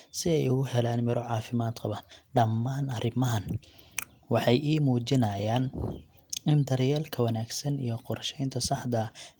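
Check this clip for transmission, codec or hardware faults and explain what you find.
One transmission fault is audible: a lost packet rebuilt from error correction. At 7.31 s, just after "in daryeelka", a 20 ms stretch turns rougher and noisier, fitting one lost packet. The next packet carried a low-bitrate copy, which the decoder played, so no gap occurs. A spectrogram shows a short, coarser slice, and the waveform stays continuous.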